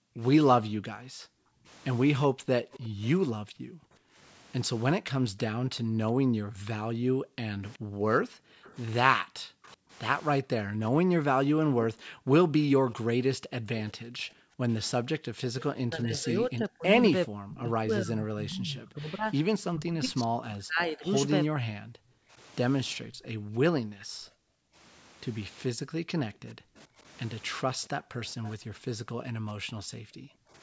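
From 0.0 to 15.2 s the room background is gated by the echo canceller. While the far end plays through the loudspeaker, the canceller pulls the microphone down hard. The background dips by up to about 40 dB, then swells back when the canceller releases. Across this stretch it is missing for roughly seven seconds in total. The same gating returns from 21.99 to 30.53 s, with drops of about 33 dB and roughly four seconds lost.

An echo leak appears at 2.73 to 3.07 s. A faint copy of the speech follows about 371 ms late, some 25 dB below it. The likely cause is a loudspeaker echo canceller failing to strip everything its microphone picked up, so the remainder travels back. The echo returns from 7.73 to 9.69 s, again 371 ms late and about 30 dB down. From 12.9 to 17.61 s it is louder, around 20 dB down, at 399 ms. A final short scrap at 28.45 to 28.51 s lags by 435 ms.

Speech is suppressed in double talk from 8.01 to 9.61 s. 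Both sides are likely talking, and the canceller cannot tell its own talker from the echo. It turns everything down, and the speech drops by up to about 40 dB in brief pieces. A longer bout runs from 15.43 to 21.71 s, with dips near 35 dB and about four seconds cut. One more short dip of similar depth comes at 26.41 to 26.68 s.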